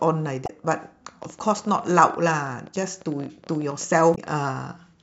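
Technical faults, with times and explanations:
0.43 to 0.50 s and 4.12 to 4.18 s: damaged data in a compressed stream. Each spot gives a brief glitch lasting about 70 ms. Corrupted bytes left the decoder unable to read those frames. It lost sync and rebuilt garbled output until it found a valid frame header.
1.09 to 4.31 s: train of clicks. Around fifty sharp ticks cut across the speech, about 15.7 per second, at uneven spacing. They peak roughly as loud as the speech itself. The likely cause is electrical interference or a faulty connection injecting repeated pulses.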